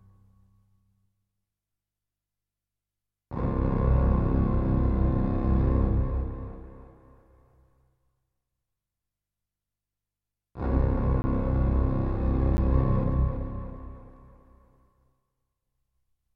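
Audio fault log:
11.22–11.24 s and 12.57 s, block of digital silence: the audio drops to silence for about 20 ms, then about 10 ms, with no fade in or out. The abrupt edges make the longer gap a brief hole and the shorter one a tick.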